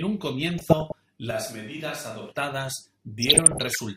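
From 0.44 to 1.0 s the speech is overlaid with DAB burbling: bubbling, squelchy chirps as single frequency bands jump in level frame by frame. Weak reception let bit errors, around half a percent, slip past error correction into the MP2 data, corrupting samples and scale factors.

From 1.31 to 2.32 s the voice turns suddenly roomy and hollow, thinner in the bass, about 5 dB quieter, with background noise roughly 25 dB below the speech. This is likely a switch to a distant microphone after the close one dropped out. What separates it from added reverberation is the abrupt change in both directions, together with the level drop and extra noise.

The burbling returns from 3.22 to 3.79 s, at a slightly higher error rate.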